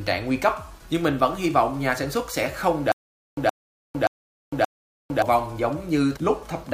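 From 2.92 s to 5.22 s the audio breaks into a stutter with silent gaps: a 120 ms burst of sound repeats four times, each followed by about 456 ms of dead digital silence, so the fragment returns every 576 ms. Everything that should have played across that stretch is missing. The likely cause is a stalled player or stream that replayed its last buffered fragment at each retry before running dry again.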